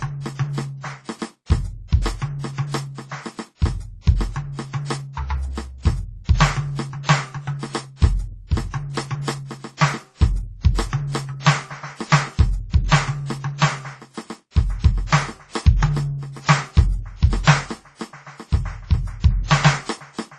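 Music that was likely transcoded between lossy codecs, with artefacts of two low-bitrate encoders stacked throughout, and nothing above 12 kHz, which fits a chain ending around 32 kbit/s.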